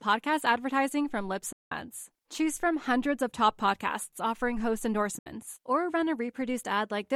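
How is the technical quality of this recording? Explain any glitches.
The recording has two gaps in the speech. Packets likely missed their delivery window to the headphones and were discarded, a Bluetooth dropout. The speech cuts to silence from 1.52 to 1.72 s, and again from 5.19 to 5.26 s, between "top podcasts offering host" and "or run a". Each time it resumes further along, as if it had kept playing.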